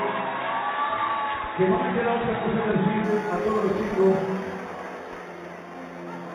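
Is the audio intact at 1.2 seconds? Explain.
Yes, the audio is intact at 1.2 seconds, with no dropout, click or other fault at that moment.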